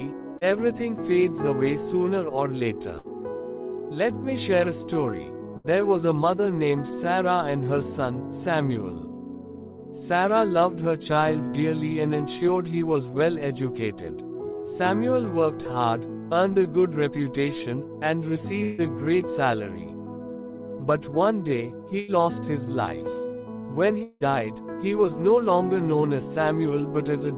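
At 0.38 s a short concealed packet loss leaves about 30 ms of audio undelivered; the receiver patches it by extending the preceding sound, producing a brief smear.

Bursts of packet loss follow at 2.99 to 3.16 s, 5.57 to 5.67 s, 18.63 to 18.81 s and 21.99 to 22.11 s. Each time, consecutive packets fail to arrive, so the receiver stretches the last sound into a fading buzz or hiss lasting between about 50 and 150 ms. The audio then resumes having skipped the lost portion, with the longest gap, 150 ms, at 18.63 s.

From 24.03 to 24.23 s, a long network dropout is the likely cause of roughly 180 ms going missing. The last sound is carried on as a fading tail for about 170 ms before the audio picks up further along.

Throughout, the call path band-limits the audio, leaving nothing above 4 kHz, which fits a narrowband G.711 codec.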